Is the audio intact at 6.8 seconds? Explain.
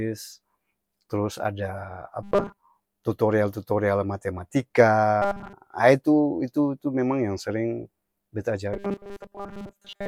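Yes, at 6.8 seconds the audio is intact, with no audible fault at that moment.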